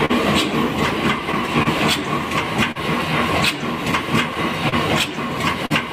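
Right at the start, from 0.05 to 0.11 s, there's a short stall from a late packet: the buffer ran dry, so about 39 ms of sound gets held with a slight buzz or dip, and nothing's actually lost. Between 1.3 and 2.8 s come scattered short gaps, around three small holes of up to roughly 40 ms each, patched by carrying the last sound forward. They show up as quick ticks and smears, and the same thing happens again from 3.9 to 5.7 s with about four of them. Under all of it there's clock drift between sender and receiver, with the sender's clock running a few percent slow, so the buffer keeps draining and you get little timing hiccups at uneven spacing.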